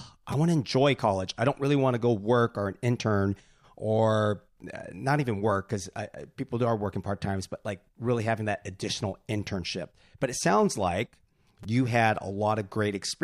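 At 0.32 s, just before "want to enjoy college", and at 11.63 s, between "it sounds like" and "you had", a repeated buffer occurs: a roughly 5 ms slice is played three extra times because fresh audio arrived late. The hard joins make a brief buzzy click, and no speech seems lost.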